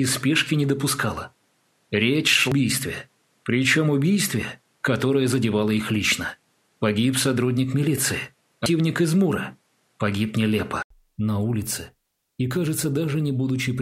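The audio sounds duller for its first 10.90 seconds, with nothing above 13 kHz. A faint background noise sits well below the signal, at around 45 dB down. At 10.90 s there is a gap of 80 ms. After it, the sound turns brighter and the level shifts by around 5 dB. The likely cause is an input switched to a poorer device. The system was recording through a narrower-band input, then changed back to the better one. Separately, two short blips occur, at 2.52 s and 8.66 s. Each is a brief glitch. These come from damaged data in a compressed stream. At each point, corrupted bytes made the decoder misread a frame and lose sync. It then skipped forward to the next valid frame header.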